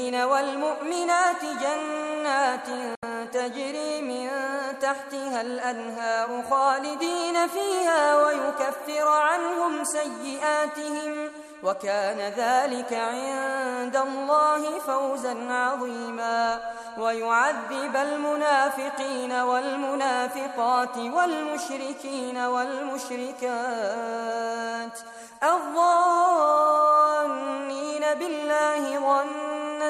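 At 2.95 to 3.03 s, a digital broadcast dropout: the receiver muted after losing about 72 ms of data, consistent with three lost frames, so the sound fades within 3 ms to silence, then returns.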